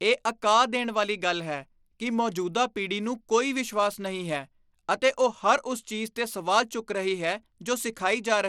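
Throughout the speech, the treble flickers and a gritty grain rides on the sound, likely from Bluetooth SBC compression with a starved bit pool, which fits a bitrate near 96 kbps. A spectrogram shows a hard ceiling at 17.2 kHz, with ragged, blinking upper bands.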